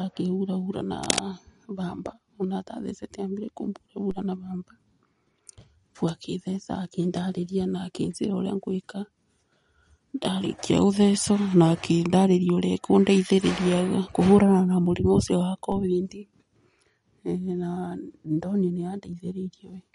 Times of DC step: 4.11, 15.72

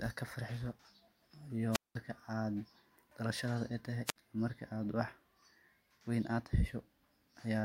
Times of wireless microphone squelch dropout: 1.71-1.95, 4.06-4.16

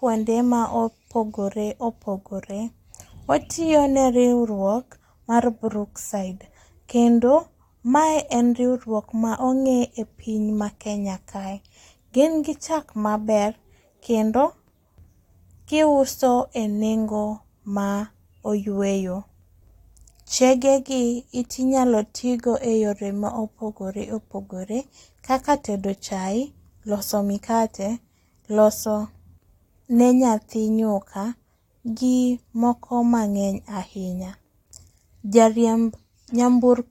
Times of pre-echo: none

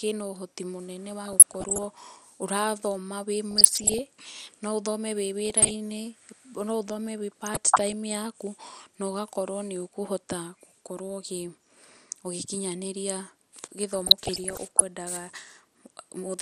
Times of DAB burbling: 1.25-1.85, 3.51-3.99, 5.45-5.74, 7.46-7.93, 13.93-14.89

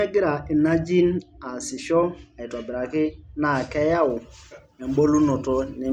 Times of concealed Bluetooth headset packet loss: none

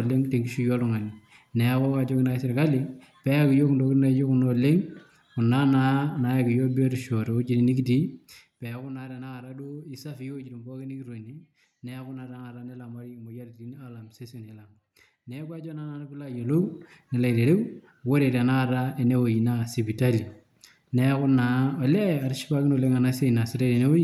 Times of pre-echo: none

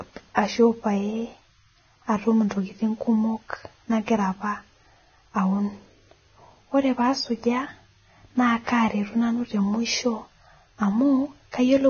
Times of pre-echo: 0.35-0.37

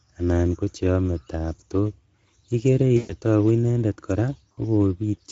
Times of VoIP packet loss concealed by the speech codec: 2.97-3.14, 4.51-4.60

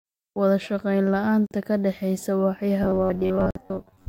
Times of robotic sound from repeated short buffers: 2.83-4.08

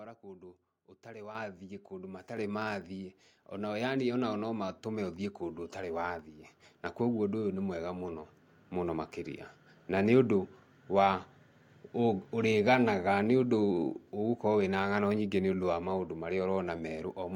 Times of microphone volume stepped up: 1.35, 2.37, 3.39

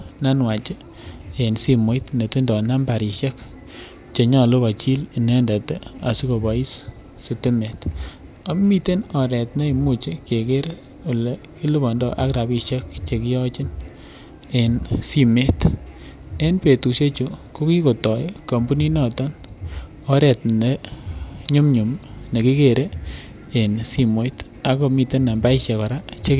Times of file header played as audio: none

